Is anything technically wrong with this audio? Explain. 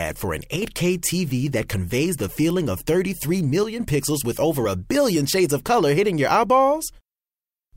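Yes. One channel drops out at 0.56–0.62 s, right after "for an", and again at 3.63–3.80 s, just before "pixels with over a". Each time the speech abruptly dips by about 6 dB and then returns. That level drop is likely one stereo channel going silent before the mono sum.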